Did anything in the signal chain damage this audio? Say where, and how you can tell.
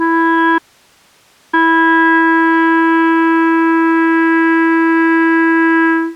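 Yes. An audio dropout to a faint residue cuts the music abruptly from 0.59 to 1.53 s, leaving only hiss about 40 dB down, likely an intermittent upstream analogue connection.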